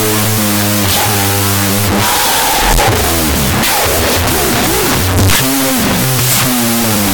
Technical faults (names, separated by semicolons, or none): wrong sample width